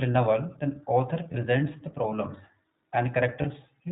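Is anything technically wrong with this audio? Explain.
Yes, there are two problems. Throughout the clip the speech sounds narrowband, clear but slightly rough and synthetic, with nothing above 4 kHz and plainly audible coding damage. This is the iLBC codec at work. It codes the excitation of each 20 ms frame on its own rather than building on the previous one, which fits its 15.2 kbps mode. That independent, low-rate coding produces the rough, synthetic edge heard across the whole clip.

At 1.32 to 1.35 s, between "a novel then author" and "the problems", and again at 3.42 to 3.46 s, the speech briefly turns into a held, faintly buzzy or breathy vowel before snapping back. These are lost iLBC frames. Each gap fits a single missing 20 ms frame, and the decoder fills it by repeating the last pitch cycle blended with noise. Because every iLBC frame decodes independently, the voice recovers almost immediately afterwards.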